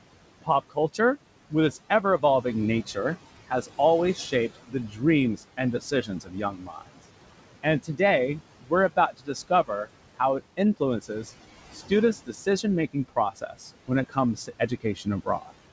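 Noise suppressor artifacts run through the whole recording. The suppressor pulls the room noise, which sits about 16 dB under the speech, down by about 18 dB in the gaps and lets it back up beneath each phrase. On a spectrogram the noise floor pumps frame by frame, with speckled, patchy texture.

Speech cut by the noise suppressor appears from 0.42 to 2.97 s, 3.5 to 6.99 s, 7.63 to 8.0 s and 8.61 to 15.51 s. Quiet parts of the speech were taken for noise and lowered by up to about 19 dB. This adds up to a few hundred milliseconds early on, about a second in the second span, a brief moment in the third and around a second and a half in the last. Those parts sound swallowed. In the waveform they show as sudden dips, and on the spectrogram as faint or missing patches. The call path's spectrum stops at 8 kHz, which fits a G.722 wideband codec.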